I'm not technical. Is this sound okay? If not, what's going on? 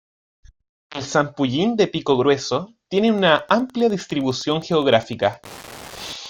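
No. From about 2.97 s to the end at 6.30 s, a faint steady ticking runs under the speech, about ten ticks a second. This is Wi-Fi interference. A nearby Wi-Fi radio's regular signal leaks into the audio circuit and becomes audible clicks.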